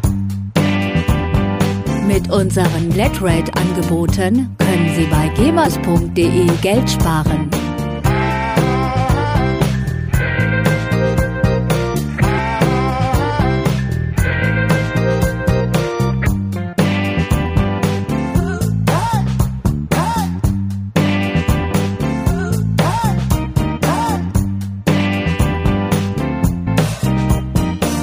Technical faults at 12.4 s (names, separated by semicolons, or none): compressed frames skipped